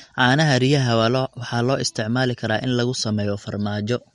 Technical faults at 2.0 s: MP3 compression

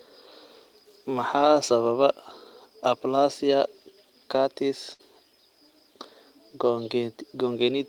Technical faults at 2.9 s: none

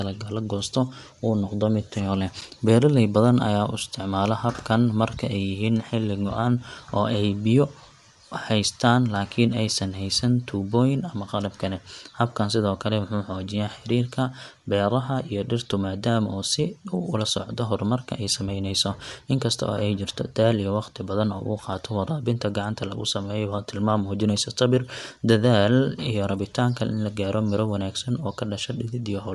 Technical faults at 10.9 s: Bluetooth LC3 compression

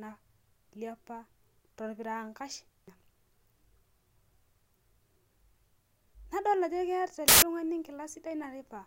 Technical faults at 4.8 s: none

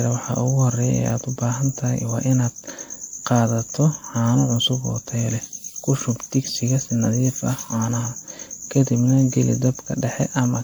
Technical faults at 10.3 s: generation loss

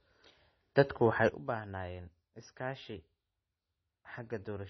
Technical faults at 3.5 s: low-bitrate audio saved at a high bitrate; sudden gain jump

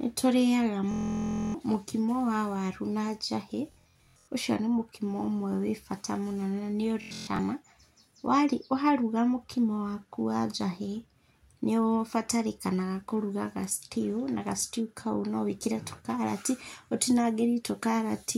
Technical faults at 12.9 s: none

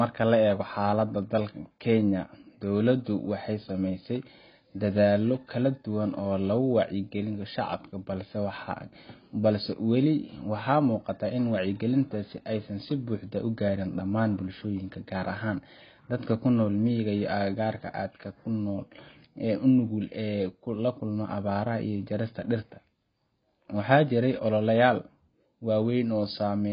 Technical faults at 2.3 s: AAC compression

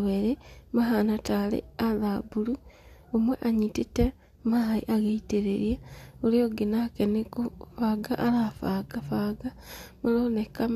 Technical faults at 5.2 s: none

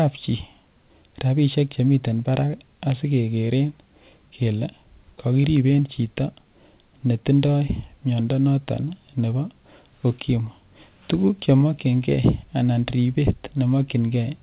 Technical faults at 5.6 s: none

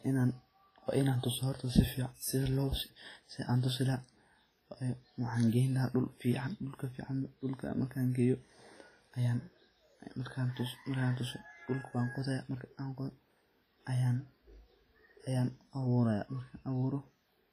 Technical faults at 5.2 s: WMA compression

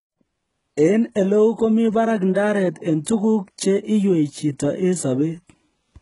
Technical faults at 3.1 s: HE-AAC compression; pre-echo

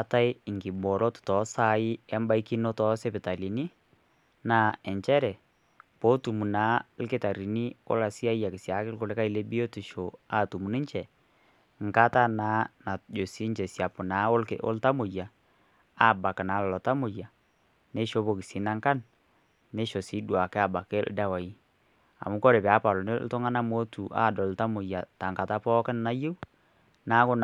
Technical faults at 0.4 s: none

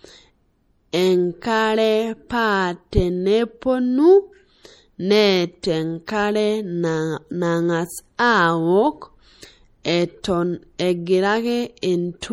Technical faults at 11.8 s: MP3 compression; pre-echo

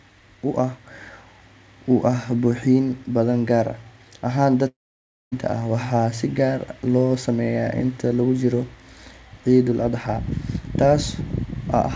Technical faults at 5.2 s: long network dropout

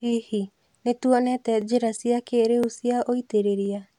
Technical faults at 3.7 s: overlapping chunks

